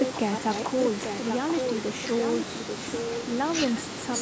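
Echo leak at 0.00 to 0.65 s and 4.18 to 4.22 s: a copy of the speech returns about 0.84 s late, fairly loud at first and fainter at the end, likely from a far-end loudspeaker's echo canceller letting it through.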